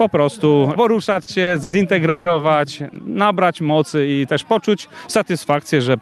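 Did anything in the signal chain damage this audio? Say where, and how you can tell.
Yes, at the network and jitter-buffer stage: repeated stalls (stutter) between 1.05 and 2.28 s. Six times the sound hangs on itself, about 380 ms in total, the longest hold about 170 ms, so roughly a third of that stretch is filler. Late packets drained the buffer and the receiver stretched the last sound until data arrived. Unlike packet-loss dropouts, nothing is cut out; the audio drags rather than skipping.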